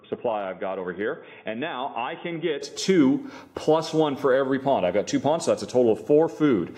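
From the start to 2.62 s the sound is dull and boxy, with nothing above 3.6 kHz, sitting about 5 dB lower than what follows and carrying a faint noise floor of its own, roughly 35 dB down. At 2.62 s it clears abruptly with no gap. The likely cause is an input switched to a poorer device. A plain filter or codec change would not also shift the level and bring in a different background noise.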